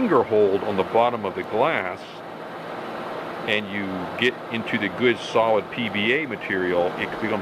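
A single flipped bit in memory or on a digital link throws one sample far from its true value before the next sample returns to normal. This bit error spike occurs at 0.36 s, peaking at about -32 dBFS, and again at 1.44 s, at about -26 dBFS, each heard as one sharp broadband tick unrelated to the surrounding sound.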